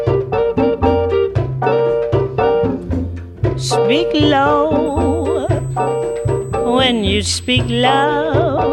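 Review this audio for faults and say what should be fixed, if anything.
USB whine from 4.86 s to 8.04 s: a steady, fixed-pitch tone at 8 kHz sits under the audio, roughly 25 dB below the signal. That pitch matches the 125 microsecond microframe rate of a high-speed USB bus. The interface's current draw pulses at that rate and leaks into the audio through a shared power or ground path. To prevent it, power the interface separately or add ground isolation, or use a better-filtered USB hub or cable.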